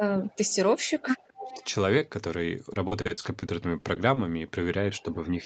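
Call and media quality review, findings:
Echo leak at 0.28–0.54 s, 1.18–1.29 s, 1.48–1.64 s and 4.96–5.15 s: faint delayed copy of the talker, 222 ms behind, roughly 20 to 35 dB down, loudest near 1.5 s. Likely cause is the far-end echo canceller passing residual loudspeaker pickup. On a spectrogram, a weak ghost of the same harmonic pattern appears, shifted 222 ms right.

Speech suppressed in double talk at 1.02–1.06 s, 1.29–1.62 s and 5.03–5.08 s: talker level dips during double talk. There are brief shallow dips of a few dB, and the 1.29–1.62 s one cuts deep, around 35 dB. The likely cause is the echo canceller's suppressor clamping both signals. The waveform envelope shows notches, and the spectrogram dims over that stretch.

Repeated packet loss (robotic sound) at 2.73–4.18 s: choppy speech from about a dozen holes, each 40 ms or shorter, with roughly a fifth of the span concealed. 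Jitter buffer and Opus concealment stretch the last frame over each hole. The spectrogram shows smeared, repeated frame slices broken by short dropouts, and the waveform shows flat or looped segments.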